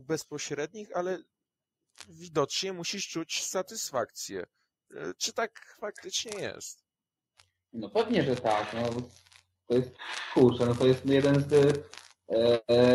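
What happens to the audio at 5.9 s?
Nothing goes wrong at 5.9 s: the audio plays through that moment without any dropout, glitch or other audible fault.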